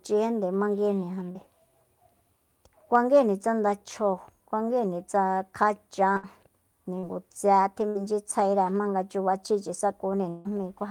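At 1.31 to 1.37 s and again at 6.99 to 7.05 s there is a short concealed packet loss: about 40 ms of the stream never reached the decoder in time, and the receiver bridged roughly 35 ms by extending the preceding sound before blending back. Each leaves a brief smear or wobble.

Right after "kuanguíjni tsa kjachan", at 6.17 to 6.25 s, a burst of packet loss drops about 60 ms. The receiver fills 62 ms by carrying the last sound on and turning it down, giving a held buzz or fading hiss before the audio resumes further along. The same happens at 7.89 to 7.97 s.

After "jmanga chubachjíchi", from 10.29 to 10.47 s, the sound is replaced for 160 ms by a continuation of what came before, which fades away without dropping to silence, and then the audio picks up past the gap. That 160 ms stretch is likely a long network dropout.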